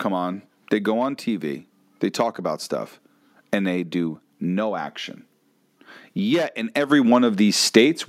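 At 6.9 s the level jumps in a single step. This is the microphone volume stepped up. The call software judged the input too quiet and raised the microphone's input volume at once, by about 7 dB. There is no gradual ramp. The speech and the background noise both get louder at the same instant. The room sound rises with the voice. That shows the change happened at the input, before any other processing.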